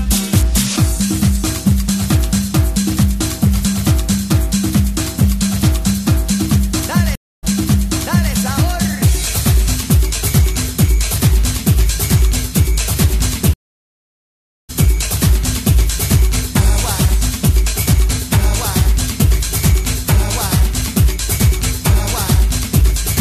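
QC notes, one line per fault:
7.15–8.33 s, stream reconnect: the connection dropped and about 0.27 s of silence follows. The restarted decoder then fades in about 0.9 s earlier, replaying a stretch already heard because the server resent a burst of buffered audio.
13.54–14.71 s, stream reconnect: a longer gap of about 1.15 s, after which the sound resumes roughly 0.7 s further on. That material is lost because the live stream kept moving while the player was disconnected.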